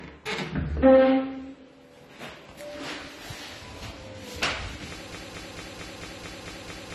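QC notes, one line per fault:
throughout: AAC compression. The signal was likely encoded as low-bitrate AAC-LC, which fits a rate around 32 kbps. With so few bits per frame, the encoder drops everything above 14 kHz and quantises the remaining spectrum coarsely, leaving gaps or patching bands with substitute noise. The damage is plainly audible: the sound is dull and smeared, with a watery, warbling or fizzy texture on sustained and hissy parts.
5.12–6.95 s: broken-record loop. Playback likely stalls and keeps re-sending the last fragment it held. A 222 ms piece repeats back to back eight times, running unbroken to the end of the clip. Each pass is identical, so it sounds like a stuck, stuttering rhythm at about 4.5 repeats a second. Whatever should have played in those final 1.8 seconds is lost.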